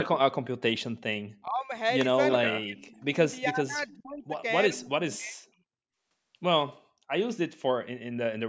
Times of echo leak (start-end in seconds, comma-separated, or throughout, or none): 2.92-3.04